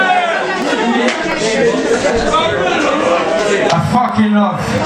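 A short stretch of audio with clock drift buffer slips: clicks repeat about every 0.69 s from 0.62 to 4.78 s, likely from mismatched device clocks dropping or repeating a few dozen samples.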